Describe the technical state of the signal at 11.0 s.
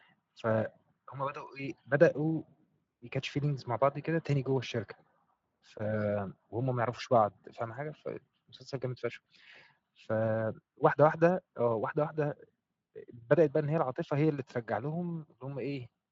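At 11.0 s the speech is intact, coming through a Speex path at about 34 kbps with no more than faint coding damage and a band that stops near 7.7 kHz.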